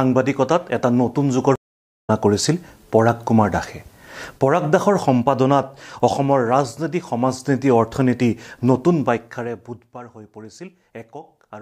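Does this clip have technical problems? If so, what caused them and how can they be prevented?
Yes. At 1.56 s the connection dropped and the player reconnected with a fresh decoder, a stream reconnect: about 0.48 s of silence, then audio resuming roughly a third of a second further on. Buffering more audio and retrying before playback runs dry would prevent this.

From 9.02 to 10.0 s, a volume change was applied in unsmoothed 2 dB steps, about ten a second, producing zipper noise: audible ticking as the level falls by roughly 20 dB. Ramping the gain smoothly within each buffer would prevent this.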